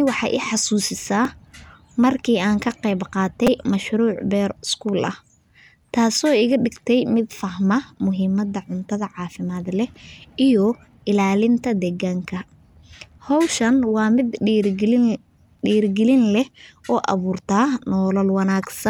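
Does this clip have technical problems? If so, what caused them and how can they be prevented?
Yes. Repeated buffer: fresh audio arrived late, so the playback device replayed its last short buffer, which fits a buffer of about 5 ms. At 1.25 s, after "waxay i xasuusisaa", one replay gives a click. At 3.47 to 3.48 s, between "markii aan ka qeyb" and "mashruuc beer", three replays give a brief buzz. Larger buffers or a less loaded audio thread would keep data arriving on time.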